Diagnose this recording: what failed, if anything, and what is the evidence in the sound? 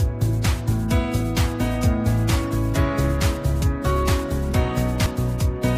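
Two events at 3.62 s and 5.06 s, each with an abrupt jump forward and no silence, as though about 70 ms went missing. At the driver or buffer stage this is likely a dropped buffer (overrun): samples were overwritten before being read, splicing the surrounding audio together.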